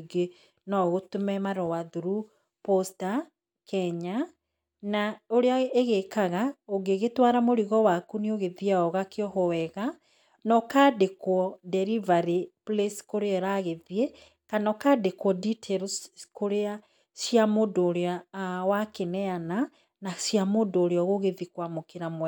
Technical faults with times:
none

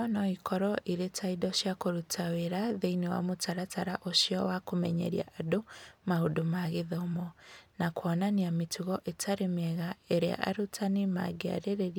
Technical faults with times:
none

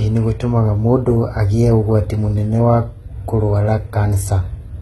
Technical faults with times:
0.00-4.81 HE-AAC compression

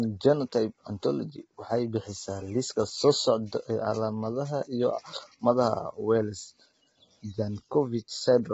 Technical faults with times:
0.00-8.53 low-delay AAC compression

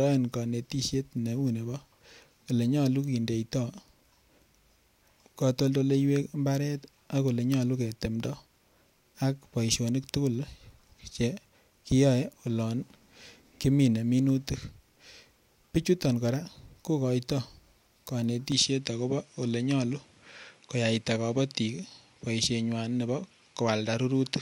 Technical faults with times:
18.52-24.42 input switched to a poorer device

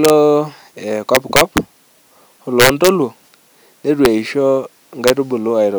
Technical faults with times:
0.05-0.10 integer overflow
1.15-1.58 integer overflow
2.60-2.89 integer overflow
4.05 integer overflow
5.08-5.10 integer overflow

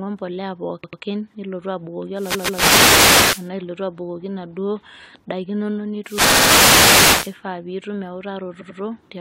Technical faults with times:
0.82-1.01 repeated frames
2.11-3.52 wireless microphone noise hit
2.33-2.61 repeated frames
6.01-7.38 wireless microphone noise hit
6.28-6.49 repeated frames
8.60-8.79 repeated frames

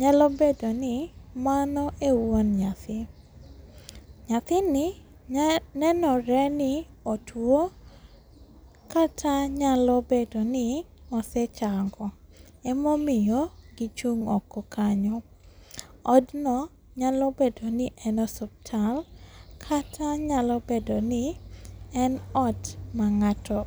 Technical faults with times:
none

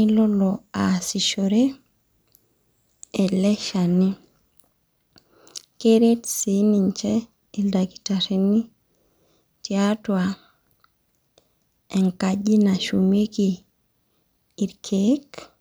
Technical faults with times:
none

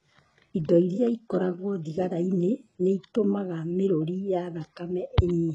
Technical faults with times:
0.00-5.54 HE-AAC compression

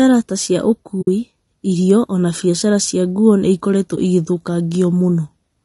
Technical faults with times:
0.00-5.65 low-delay AAC compression
1.01-1.08 AAC frame loss with muting
3.96-3.98 AAC frame loss with muting

